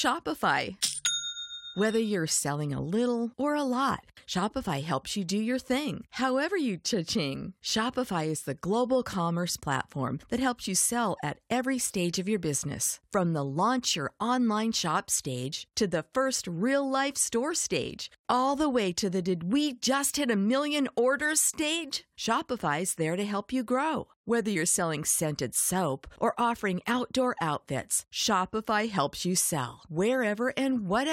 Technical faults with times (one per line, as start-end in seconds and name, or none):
15.51 damaged data in a compressed stream
21.25 damaged data in a compressed stream
24.55 damaged data in a compressed stream